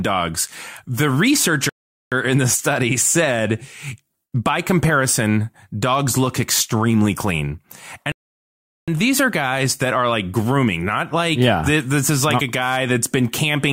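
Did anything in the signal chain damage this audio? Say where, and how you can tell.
Yes. The damage is at playback, as a rebuffering stall. The speech cuts to silence from 1.69 to 2.12 s, and again from 8.12 to 8.88 s. Each time it resumes exactly where it stopped. The player ran dry and waited, adding 0.42 s and 0.76 s.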